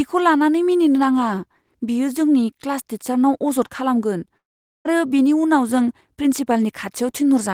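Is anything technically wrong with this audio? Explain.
Yes. From 4.37 to 4.87 s the speech stops, most likely because of a long network dropout: the stream stopped delivering audio for about half a second, and the receiver had nothing real to play. For a brief moment it extends the last sound as a fading buzz or hiss. Then roughly 440 ms of silence follows before the speech resumes further along, with about 480 ms of the original audio simply gone rather than delayed.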